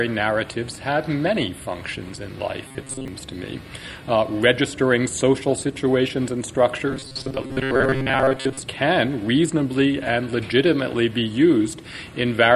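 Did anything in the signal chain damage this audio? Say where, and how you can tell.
Yes, robotic sound from repeated short buffers at 2.67–3.08 s and 6.91–8.60 s: a rigid 133 Hz buzz, unlike shifting codec warble, likely from a starved buffer looping 7.5 ms.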